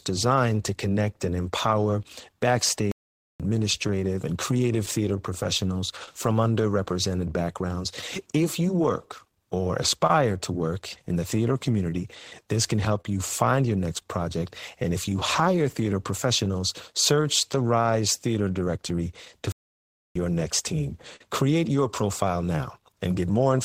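Clock drift between sender and receiver runs through the whole recording. The sender's clock runs a few percent slow, around 3 percent behind the receiver's. The receiver's buffer keeps draining. It has to make up time all the way through. The result is small, uneven timing hiccups across the speech rather than one clear event.

Repeated timing corrections begin at 0.27 s and continue to 23.57 s. The receiver stretches the speech to keep pace, playing it at an effective 98 percent speed. Short pieces are repeated here and there. In total the stretching adds something like 0.4 s. Each edit is tiny. Together they give a slightly unsteady, dragging tempo.

Scattered short gaps appear between 1.91 s and 6.08 s. There are about ten holes, each very short, around 10 ms at most. The receiver fills each one by carrying on the last sound. These patches take up only a small share of the stretch. They come through as brief ticks or smears in otherwise clear speech.

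A playback stall hits from 2.92 s to 3.40 s. The output drops to silence for 483 ms in mid-flow and then resumes. The likely cause is the player running out of buffered data, which fits a slow sender draining the buffer. It sounds like an abrupt freeze and a gap.

Two more stretches of scattered short gaps follow. The first runs from 8.01 s to 13.05 s, with about ten holes. The second runs from 16.45 s to 21.21 s, with about seven. In both, the longest hole is roughly 40 ms. Each is again patched by extending the preceding sound. They come through as brief ticks or smears.

A second playback stall falls within that last stretch, from 19.52 s to 20.15 s. The sound stops for 635 ms, longer than the first. Then the speech picks up again.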